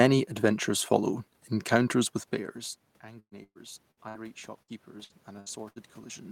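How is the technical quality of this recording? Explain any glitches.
The recording has two audible faults: a slow swell in level and two choppy, robotic stretches.

From 2.31 s, just after "adventures follow encounters with", the speech and the room noise behind it grow steadily louder together until the end. This is automatic gain rising. The input fell by about 22 dB, and the gain control is slowly pushing its gain up to compensate.

Between 3.19 and 4.17 s, and again between 4.62 and 5.79 s, the speech turns choppy and broken, with pieces missing. This is repeated packet loss. Each stretch has four gaps patched by extending the last sound. About a third of the first stretch is patched (the longest gap is about 119 ms), and about a fifth of the second (about 66 ms).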